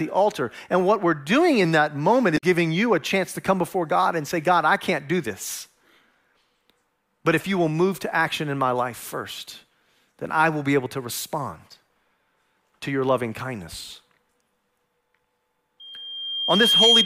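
A drift correction step runs from 1.65 to 3.03 s, between "what we're doing" and "to come before": the speech slows by 5.3% and drops about 94 cents, nearly a semitone, then snaps back. This is likely a clock-matching resampler jumping its rate once to rebalance its buffer.

Damaged data in a compressed stream sits inside that stretch, from 2.34 to 2.43 s. Corrupted bytes made the decoder misread frames and lose sync while it hunted for the next valid header, leaving a brief glitch.

A loudspeaker feedback squeal begins at 15.80 s and lasts to the end of the clip. A microphone is picking up its own loudspeaker, and at 3.2 kHz the loop gain exceeds one. That single tone swells over roughly a second into a piercing whistle about 10 dB above the speech.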